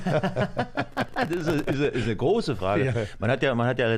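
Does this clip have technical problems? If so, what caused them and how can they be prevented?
Yes: processor overload crackle from 0.92 to 1.85 s. Dozens of very short buffers, around 1.5 ms, missed their deadlines and dropped out as silent gaps, appearing as broadband vertical streaks on a spectrogram. Use larger buffers or reduce processing load.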